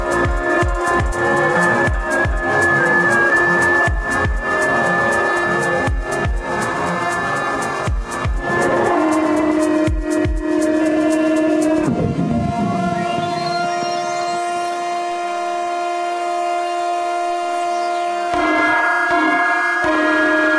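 No technical faults can be heard anywhere in this recording; the signal stays continuous throughout.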